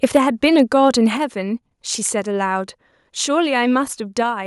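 From 0.03 to 0.18 s, the loudest peaks sound harsh and crackly. This is microphone overload, likely from input gain set too high. Peaks run about 5 dB past the converter's limit, and a few percent of the waveform is flattened. At 0.17 s the level drops abruptly by about 3 dB. That is a microphone volume step-down, likely the call software cutting input gain after the distorted peak. From 0.44 to 0.89 s, milder overload returns at about 1 dB over. Only a small fraction of peaks are clipped. At 1.17 s a second, larger step of about 6 dB follows. Voice and background fall together.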